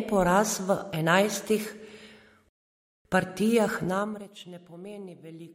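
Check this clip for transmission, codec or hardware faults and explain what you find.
One fault stands out in this speech clip: a rebuffering stall. From 2.49 s to 3.05 s the speech halts into silence, adding about 0.56 s to the running time. The player has exhausted its downloaded audio and waits for more data before continuing. What separates this from a dropout or packet loss is that nothing goes missing. The speech picks up at exactly the point where it stopped, with no skipped syllables and no clipped onset, just inserted dead air.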